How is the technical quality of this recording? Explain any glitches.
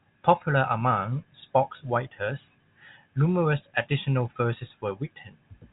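Listening through this telephone-band speech, nothing stood out as a glitch or technical problem.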